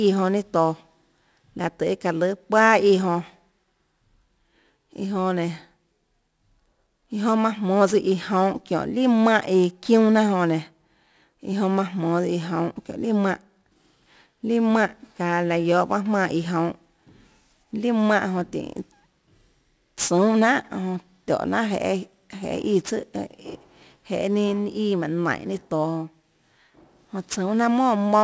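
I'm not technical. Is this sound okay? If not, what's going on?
No, there's aliasing the whole way through: the sound was squeezed down to a lower quality, which fits a 16 kHz rate, so high hiss turns gritty, folding back below 8 kHz.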